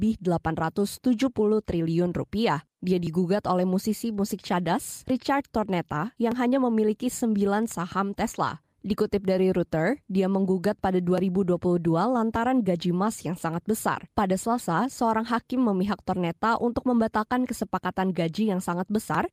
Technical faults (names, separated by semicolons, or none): none